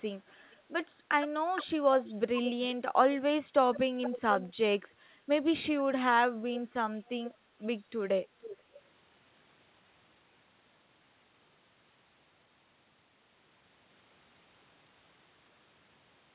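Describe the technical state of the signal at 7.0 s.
At 7.0 s there is an echo leak running from 6.98 to 7.09 s. The likely cause is a far-end loudspeaker whose echo canceller let part of its microphone pickup slip through and return down the call. What comes back is a very faint, roughly half-second-delayed copy of the earlier speech, about 478 ms behind. It is a brief ghostly scrap sitting far beneath the live speech, narrowed like everything else to the call's 4 kHz band.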